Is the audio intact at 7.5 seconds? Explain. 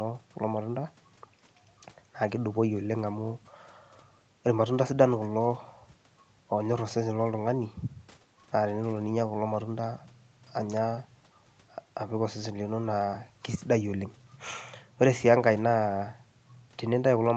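Yes, the audio is intact at 7.5 seconds, with no dropout, glitch or other fault in the speech at that moment.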